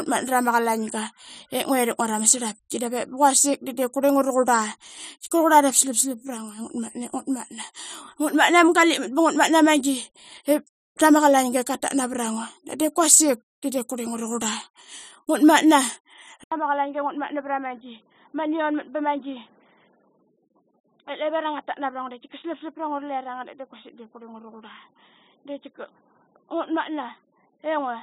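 Speech; at 16.44 s an 80 ms gap, then it's quieter by about 10 dB, dull and boxy with nothing above 3.8 kHz, plus a new faint noise floor to the end. Likely the input switched to a poorer device with narrower bandwidth.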